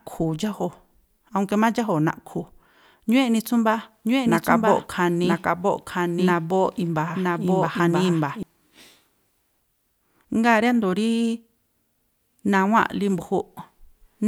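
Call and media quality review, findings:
Doubled audio track, 4.05 to 8.43 s: the speech is overlaid by a dry, full-band second copy about a second behind and about 5 dB quieter, with no decay or room colour. The copy starts and stops abruptly at those times. Likely cause: a second, slower capture or mix path feeding the same signal into the output.

Dropped samples, 5.33 s: a single sharp click, a thin vertical line across the spectrum. The waveform jumps forward where a fraction of a millisecond of samples is missing, too brief to remove any audible sound. Likely cause: a capture or transport buffer briefly losing a few samples.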